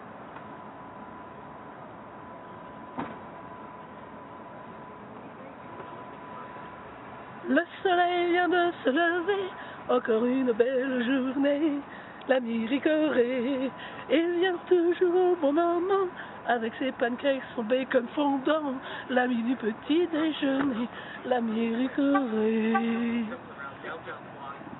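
No technical faults can be heard anywhere in the audio, and the signal stays steady and intact throughout.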